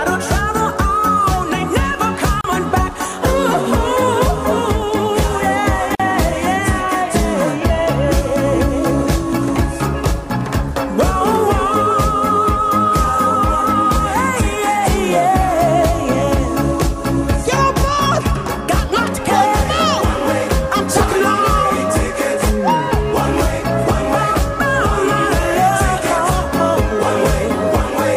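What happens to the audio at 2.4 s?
At 2.41 s there's a gap at a join of encoded pieces: a gap of about 34 ms with smeared edges, left by untrimmed encoder delay and padding, then the sound picks up where it stopped.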